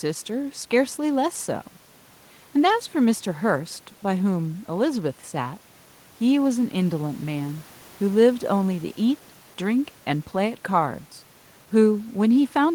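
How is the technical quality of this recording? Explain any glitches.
No glitches are audible in the recording, with only a low bed of room noise sitting about 32 dB below the speech.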